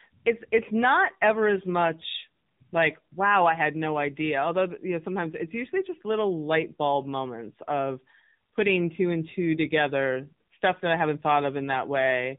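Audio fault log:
Throughout: AMR narrowband mobile codec. The speech has the boxed-in sound of a phone call, with nothing above about 3.8 kHz, so sibilants and breath lose their edge. The codec rebuilds the sound from a vocal-tract model excited by a sparse set of pulses in short sub-frames, and at this plainly audible level of damage the voice comes out buzzy and synthetic. That points to a low bitrate, around 7.4 kbps AMR-NB.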